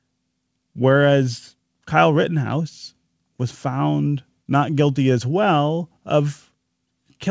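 Speech through a WebRTC call path, with nothing above 8 kHz, consistent with a wideband call codec such as G.722, and no technical faults audible.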